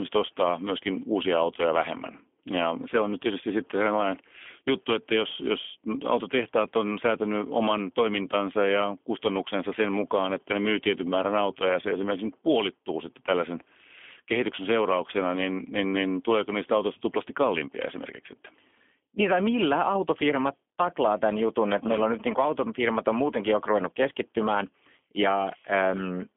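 Throughout the speech, G.729 coding confines energy to 200 Hz–3.4 kHz, a hard ceiling on the spectrogram; model-rebuilt, plainly rough, synthetic sound points to an 8 kbit/s rate.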